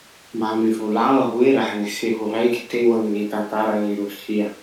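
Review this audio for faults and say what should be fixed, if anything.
No faults found; nothing to fix.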